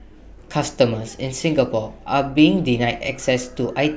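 No technical faults are audible.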